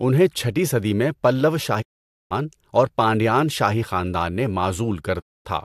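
Speech with two digital broadcast dropouts: the receiver fades to silence within about 20 ms at 1.81 to 2.33 s, after "چھٹی صدی میں پلّوا", and again at 5.19 to 5.47 s. The signal mutes cleanly instead of turning garbled, which points to whole lost frames rather than codec glitches.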